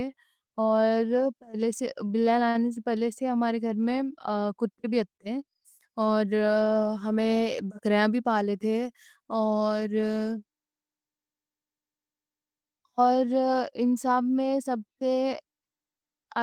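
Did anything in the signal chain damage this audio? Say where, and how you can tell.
Yes. Short stalls from late packets at 2.07–2.11 s, 2.49–2.57 s and 5.17–5.21 s: on the network path, the jitter buffer ran dry and the receiver stretched the last sound by 20, 52 and 26 ms, then resumed without loss.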